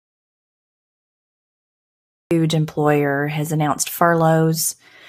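An audio dropout to silence runs from the very start of this speech clip to 2.31 s, where the sound enters mid-flow on "employer has announced". The gap is silent with no room tone, most likely because the input was lost while the recorder kept writing silence.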